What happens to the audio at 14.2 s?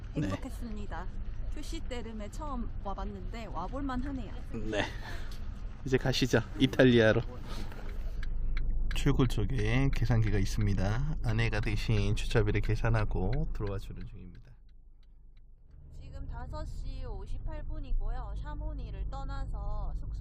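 At 14.2 s the sound is inside a stretch of zipper noise running from 13.42 to 14.43 s. The level falls by roughly 20 dB in unsmoothed steps, a few hundred per second, and each step leaves a tiny click, so a buzzy zipping rides on the drop. A smooth fade would lower the level without that ticking texture.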